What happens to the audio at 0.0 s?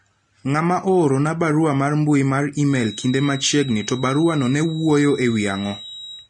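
Right from 0.0 s the speech already carries what sounds like Vorbis compression, and it runs through the whole clip rather than starting at that moment. Nothing comes through above about 10.6 kHz, and the damage is plainly audible: the top end turns hissy and grainy, tones get roughened and attacks blur. That fits a low bitrate, something around 31 kbps, where the codec likely quantised the treble so coarsely that fine detail collapsed into noise.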